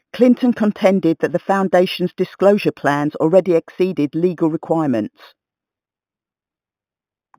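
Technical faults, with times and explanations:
Throughout: imaging from linear upsampling. The band edge near 4 kHz sounds dulled, with a faint mirrored copy from 4 kHz to 8 kHz, roughly 30 dB down, giving sibilants a light metallic shimmer. This fits straight-line interpolation from 8 kHz to 48 kHz.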